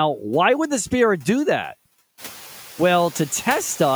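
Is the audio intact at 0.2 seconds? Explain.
No. Noise suppressor artifacts run through the whole clip, including 0.2 s. The suppressor pulls steady-looking bands down frame by frame, trimming the noise by only about 3 dB. The noise sinks between the words and rises under them instead of holding steady, unlike plain room noise.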